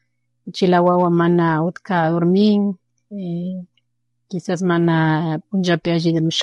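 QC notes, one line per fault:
Throughout, low-delay AAC compression: the speech sounds plainly rough and grainy, likely from a short-frame codec such as AAC-ELD at around 32 kbps, whose brief frames resolve pitch harmonics poorly. A spectrogram would show smeared harmonic stripes with noise filling the gaps between them.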